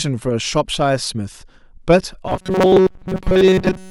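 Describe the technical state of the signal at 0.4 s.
At 0.4 s the speech signal is intact, with no audible dropout, distortion, noise or timing fault at that point.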